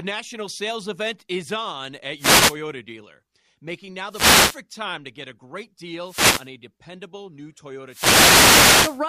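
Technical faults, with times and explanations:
2.16–2.57 s, 4.09–4.59 s, 6.03–6.50 s and 7.87–9.03 s: wireless microphone noise hits. The FM radio link fades as reflections cancel, so receiver noise swells into short bursts of static over the speech.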